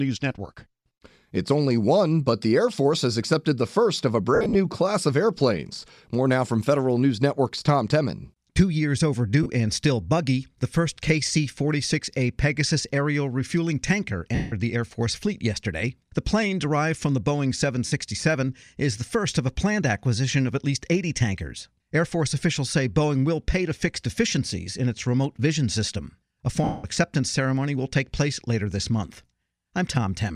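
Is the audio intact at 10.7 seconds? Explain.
Yes, the speech at 10.7 seconds is intact, with only the light coloration of what is likely Bluetooth LC3 coding at a comfortable bitrate and no fault at that moment.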